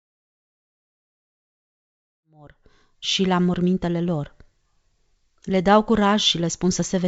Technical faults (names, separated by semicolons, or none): none